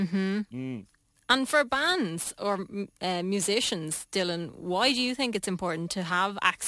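Throughout the speech, aliasing: the sample rate was lowered without an anti-alias filter, which fits a drop to 24 kHz. Content above 12 kHz folds back below that edge, leaving sibilants gritty and metallic, with spurious tones roughly 20 dB under the signal.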